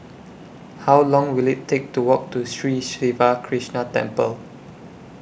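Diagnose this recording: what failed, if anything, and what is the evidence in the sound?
Nothing in the recording points to a failure at any stage of the chain, from capture through to playback, and the speech signal shows no audible technical disturbance anywhere.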